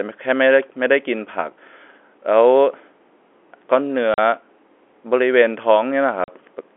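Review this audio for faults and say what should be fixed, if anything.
Packet loss filled with silence cuts two 40 ms holes into the speech, at 4.14 s and 6.24 s. Each gap starts and ends abruptly. Its length fits two consecutive 20 ms packets that went missing and were replaced by zeros instead of being concealed. Around the gaps the narrow 300 Hz to 3.4 kHz band of the G.711 telephone coding can be heard. Enabling packet loss concealment at the receiver, with forward error correction or a deeper jitter buffer on the link, would stop such gaps from reaching the listener as hard silences.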